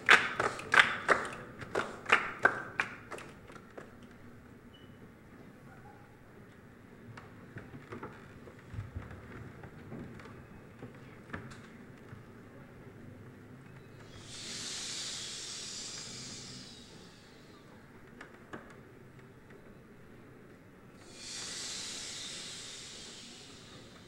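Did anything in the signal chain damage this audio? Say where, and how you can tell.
Yes, at the driver or buffer stage: two bursts of processor overload crackle, from 0.36 to 0.65 s and from 11.97 to 12.43 s. The processor missed buffer deadlines in a row, and each missed block was skipped, leaving short hard-edged gaps. The gap spacing fits buffers of about 5 ms, with a handful missed in the first burst and a dozen or more in the second. A waveform shows small notches with vertical edges, and a spectrogram shows clustered broadband vertical streaks.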